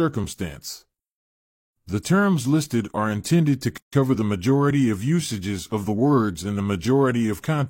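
At 3.78 s, right after "listed are intended to", a gap at a join of encoded pieces cuts 148 ms of silence into the speech until 3.93 s. Unlike a dropout, nothing is lost: the speech resumes exactly where it stopped, with smeared edges.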